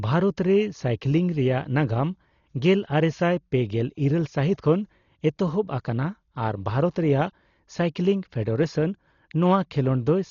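From start to finish the speech sounds dull and muffled, with nothing above about 6.9 kHz, plus a rough, fluttering noise. That's heavy damage from likely Dolby Digital compression at a very low bitrate, around 32 kbps. The encoder dropped the top band, and many frequency lines came back as dither noise.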